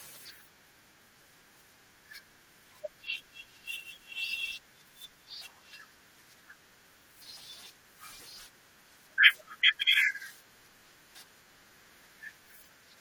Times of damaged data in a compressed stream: 7.84, 11.14

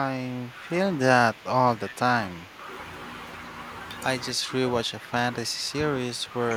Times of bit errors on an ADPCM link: none

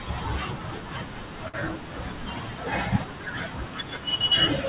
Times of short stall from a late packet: 1.48-1.56

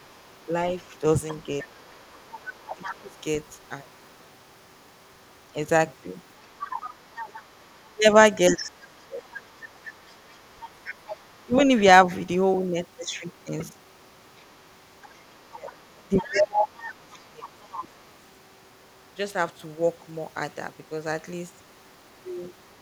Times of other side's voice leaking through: 0.00-4.27, 6.59-11.42, 14.39-17.88

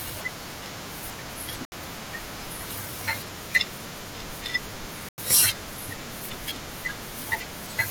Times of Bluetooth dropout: 1.65-1.73, 5.09-5.20

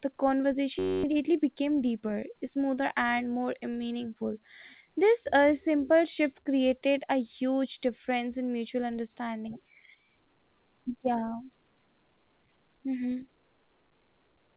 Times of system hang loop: 0.79-1.03

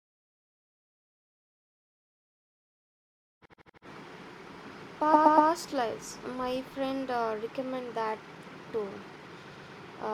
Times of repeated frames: 3.45-3.85, 5.13-5.49, 9.51-9.75

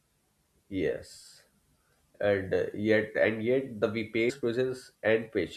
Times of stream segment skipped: 4.29

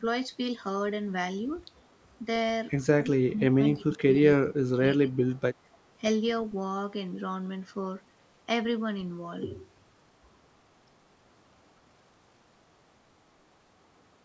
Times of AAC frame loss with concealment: none

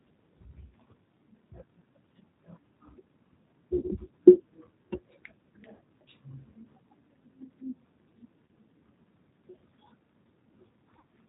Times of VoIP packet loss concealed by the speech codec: 3.76-3.84, 5.75-5.81, 8.45-8.48, 10.99-11.04

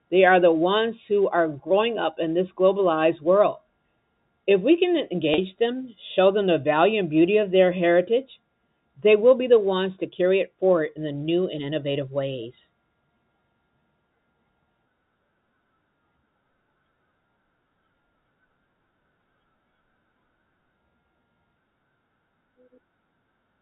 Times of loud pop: none

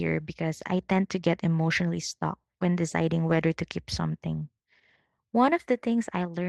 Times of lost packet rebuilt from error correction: 3.29-3.31

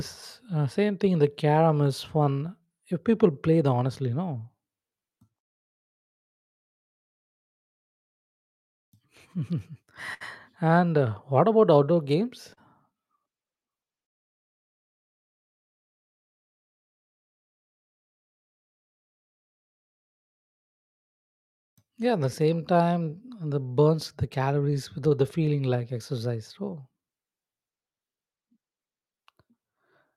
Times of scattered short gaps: 7.79-12.59

